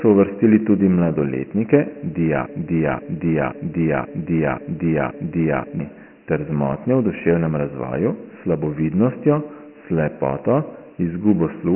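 The speech throughout carries Dialogic VOX ADPCM coding. Nothing reaches above 3 kHz, heavy gritty hiss rides on the speech itself rather than sitting under the pauses as steady noise would, and the narrow band fits 4-bit samples at 6,000 per second, about 24 kbps. From 2.46 to 5.80 s a broken-record loop repeats one 0.53 s piece exactly, six times back to back, before "ter z motnjo v" resumes. It likely comes from a stalled stream resending its last fragment. Unlike jitter stutter, the repeats are identical and the missing audio never returns.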